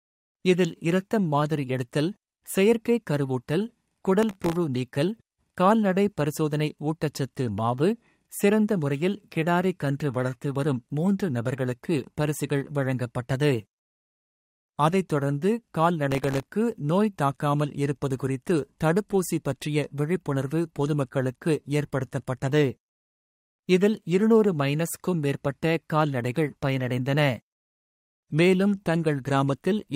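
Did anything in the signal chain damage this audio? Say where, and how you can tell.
Yes, at the driver or buffer stage. Processor overload crackle tears through the sound from 4.23 to 4.56 s and from 16.12 to 16.46 s. Dozens of tiny buffers, each under a millisecond, missed their deadlines. Each gap replayed stale audio with hard edges.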